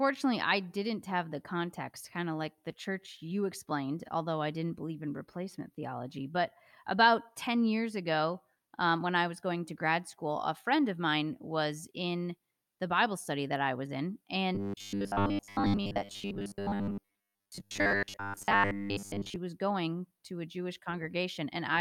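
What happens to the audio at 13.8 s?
Nothing goes wrong at 13.8 s; the speech carries on intact through that moment, with no dropout, click, glitch or other fault.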